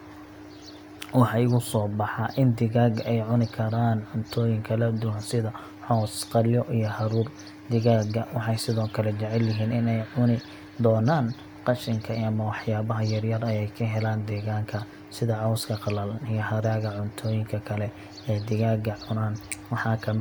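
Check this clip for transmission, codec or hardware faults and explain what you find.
No technical fault can be heard in the speech: the signal stays steady and continuous throughout, with nothing that points to trouble in transmission, encoding or the hardware.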